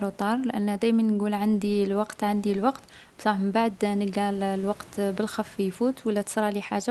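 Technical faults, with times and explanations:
Nothing stood out on listening to this speech; the room noise sits about 30 dB below it.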